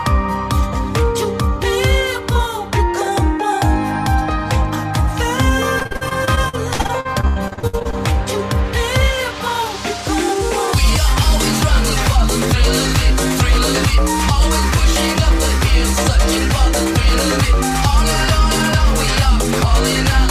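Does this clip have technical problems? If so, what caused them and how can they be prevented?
Yes. Repeated packet loss (robotic sound) from 5.79 to 7.95 s: many holes up to 89 ms, covering about a third of the span, are patched with repeated sound, giving choppiness rather than clean silent dropouts. Prevent it with a steadier network connection and a larger jitter buffer.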